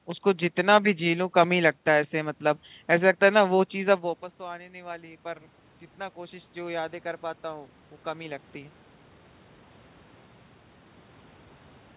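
From 3.84 to 5.53 s and again from 6.14 to 8.83 s, automatic gain rising follows the talker moving away near 4 s. The input fell by about 17 dB, and the gain climbs gradually, about 4 dB then about 5 dB. Room noise swells with the voice, unlike a talker simply approaching.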